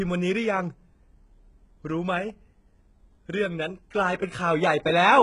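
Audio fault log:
Throughout: HE-AAC compression, heavy. The speech has nothing above 11 kHz, and its upper range sounds bright but not genuine. Sibilants come out gritty and lispy, with a metallic edge. The likely cause is HE-AAC at a very low bitrate, around 12 kbps. Only the lower spectrum is properly coded. The treble is rebuilt by copying lower bands upward under a coarse envelope. Harmonics then fail to line up across the crossover.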